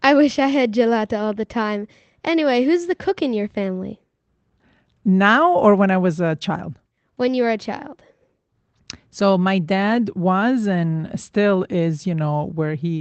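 No technical faults can be heard in this speech recording. It has passed through a call path with the Opus codec working normally, and its upper frequencies stop at around 8 kHz, which fits a modest call bitrate near 20 kbps.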